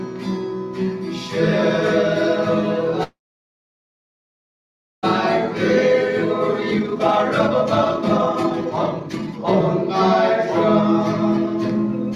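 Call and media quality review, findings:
Call audio freeze, 3.03–5.05 s: brief continuation of the last sound, then about 1.9 s of silence. Audio resumes exactly where it stopped, with nothing skipped. Likely a jitter buffer underrun from delayed packets; the receiver filled the wait, adding about 2 s of delay. Unlike packet loss, no content is dropped.

Jitter buffer speed-up, 6.54–10.0 s: audio runs at about 153% speed and sounds hurried. The receiver trims pitch-period slices to drain the backlog, removing roughly 2 s in total. Pitch stays unchanged, which rules out a clock or sample-rate mismatch.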